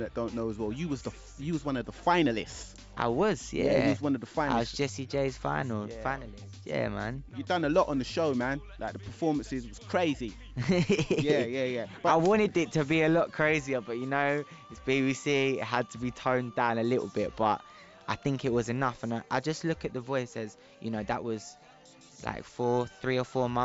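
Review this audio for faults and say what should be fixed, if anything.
No faults found; nothing to fix.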